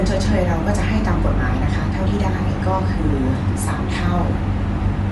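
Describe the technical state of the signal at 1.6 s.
Across the whole clip, including 1.6 s, Bluetooth LC3 compression is plainly audible: nothing above 11.6 kHz, noise-filled upper bands giving a grainy breathiness rather than plain dullness, likely from a 48 kbps link.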